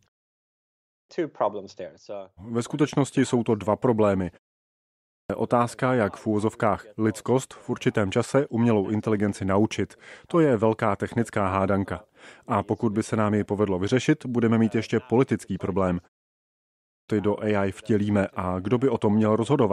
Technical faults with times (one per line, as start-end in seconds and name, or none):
0.47-1.09 clipped start after a pause
4.72-5.30 clipped start after a pause
16.48-17.09 clipped start after a pause